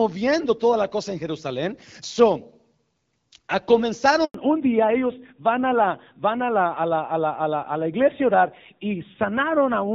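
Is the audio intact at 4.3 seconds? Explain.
No. At 4.3 s the sound falls inside a handover gap running from 4.24 to 4.34 s, about 100 ms of silence. While the call was switched from one network to another, no speech frames reached the receiver, so the sound dies away within a few tens of milliseconds and stays silent until the new link delivers audio. Unlike a burst of packet loss, where concealment smears or repeats the last sound, this is one clean, complete hole, and whatever was said during it is gone.

The silence ends with a fallback to narrowband. From 4.34 s to the end of the clip, nothing above 4 kHz remains. Before the break, the HD Voice stream was clear and only lightly coded. Afterwards the call carries a narrowband codec at a low rate, which fits AMR-NB, and the sound becomes duller and rougher. A low-bitrate wideband codec would sound rough but keep its top band up to about 7 kHz. 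Here the top band disappears entirely at the instant of the handover.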